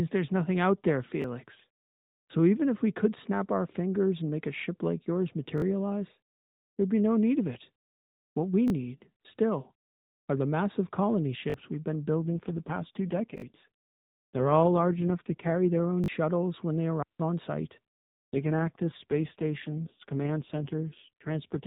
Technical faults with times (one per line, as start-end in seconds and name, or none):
1.22-1.24 repeated buffer
5.58-5.62 repeated buffer
8.68 repeated buffer
11.50-11.54 repeated buffer
12.22-15.80 AMR rate drop
13.38-13.42 repeated buffer
16.04-16.08 repeated buffer
17.02-17.20 digital wireless dropout
18.33-21.66 AMR rate drop